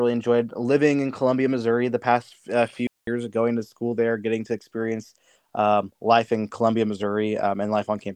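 At 2.87 to 3.07 s the speech drops into a digital wireless dropout: the receiver mutes for 204 ms after losing data, leaving a clean near-silent gap, a flat waveform and blank spectrogram.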